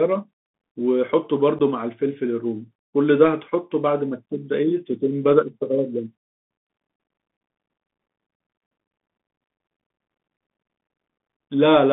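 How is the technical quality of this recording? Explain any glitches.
The technical quality is poor. The speech runs over a Bluetooth CVSD headset codec throughout. Nothing passes above about 3.5 kHz or below 150 Hz. One-bit delta coding adds granular hiss and scratchy s sounds.

At 1.59 s there is unconcealed Bluetooth headset packet loss. A few voice packets vanish, leaving an 11 ms hole with abrupt edges.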